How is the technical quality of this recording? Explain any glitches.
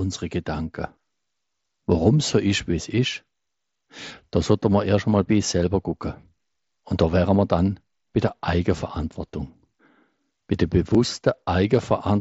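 The recording reaches us through a wideband Bluetooth headset link, consistent with mSBC, with a light grain on louder speech and a brief glitch at two points.

Concealed Bluetooth headset packet loss occurs at 5.91 s, just after "einmal bei sich selber", and again at 10.94 s. Each time roughly 7.5 ms of audio, which points to a single lost packet, was patched by repeating the best-matching recent waveform, leaving the gap nearly hidden.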